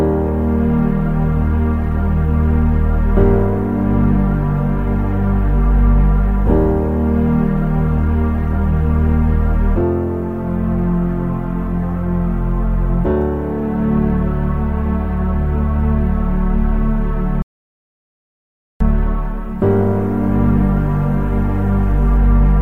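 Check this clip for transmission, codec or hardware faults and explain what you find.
One fault stands out: an audio dropout to silence from 17.42 s to 18.80 s. The sound cuts off abruptly mid-flow and returns just as suddenly. For about 1.38 s the signal is silent, with no background or room tone underneath. The likely cause is a lost input, such as a disconnected device, a failed link or a momentary mute, while recording carried on writing silence. Whatever sounded during that gap is gone.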